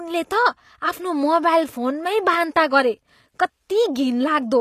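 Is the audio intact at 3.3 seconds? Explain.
No, at 3.3 s, as across the whole clip, it's likely HE-AAC compression: nothing above 14.9 kHz survives, and the treble below that is rebuilt from copied lower bands, so the s sounds come out gritty and lispy.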